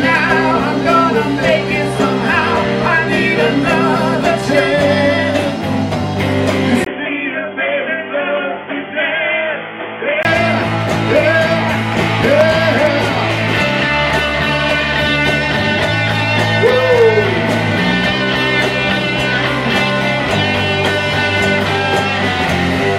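At 6.85 s the input was likely switched to a poorer device, such as a headset's call profile, and it stays there until 10.25 s. A 20 ms gap of silence marks the switch. Everything above 3.4 kHz disappears, so the sound turns dull and boxy. It also drops to a somewhat lower level, around 5 dB quieter, and picks up a new background noise roughly 30 dB below the signal. At 10.25 s the full, clearer sound returns.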